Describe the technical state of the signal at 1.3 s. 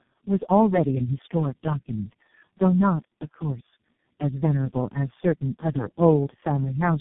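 At 1.3 s the speech carries tandem speech coding, a fault present throughout the clip. The signal was decoded and re-encoded by several low-rate speech coders in sequence, each working on the previous coder's already degraded output, and the accumulated damage fits a chain of about four such coders. The result is rough, muffled and warbly speech, with nothing above 3.6 kHz.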